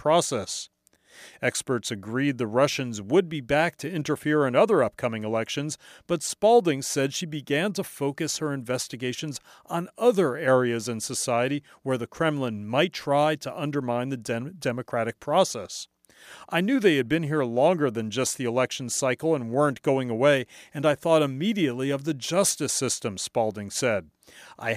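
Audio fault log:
No technical faults heard anywhere in the speech.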